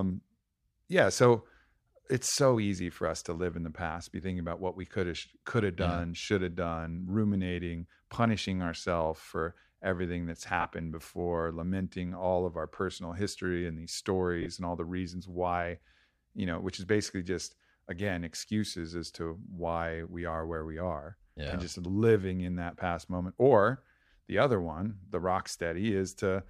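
Lost LE Audio frames cause three brief gaps: 40 ms at 10.61 s after "ourselves for everything that's", 40 ms at 14.42 s after "personal history and these", and 30 ms at 21.49 s before "and just living in". The decoder repeats the last spectrum with random signs, so each gap sounds like a short noisy smear.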